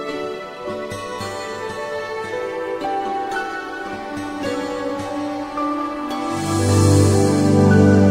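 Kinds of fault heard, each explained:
No technical faults are audible anywhere in this clip.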